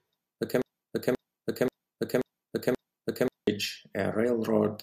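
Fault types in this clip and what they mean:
Broken-record loop: the player, encoder or stream likely stalled and kept resending the last fragment it held, so a 0.53 s piece of speech repeats exactly five times back to back from 0.62 to 3.47 s, and the speech due then is lost.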